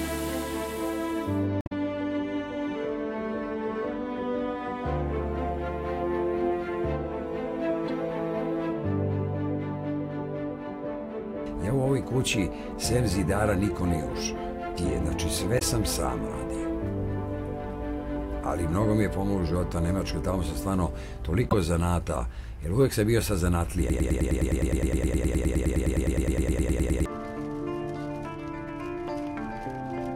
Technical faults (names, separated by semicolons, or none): damaged data in a compressed stream; broken-record loop